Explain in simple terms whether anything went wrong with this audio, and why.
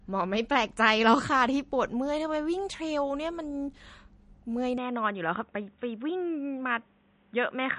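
Throughout the recording the speech sounds plainly watery and swirly, with nothing above about 10.1 kHz, so the crisp top end is missing. This is most likely MP3 compression squeezed too hard: the encoder saved space by cutting off treble and dropping quieter details.

At 4.78 s the sound turns duller and boxier until the end, with nothing above about 3.8 kHz and no gap at the change. This is likely an input switched to a poorer device, such as a headset microphone that captures a narrower range.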